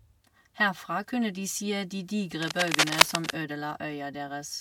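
At 2.42 s a burst of cable scratch noise breaks in over the speech and lasts until 3.30 s. It sounds like dense, ragged scratching and rustling. The noise sits somewhat louder than the speech itself. The likely cause is a worn cable, connector or control being moved. Its contact resistance then jumps around rapidly, and the jumps inject uneven crackle into the signal for almost a second.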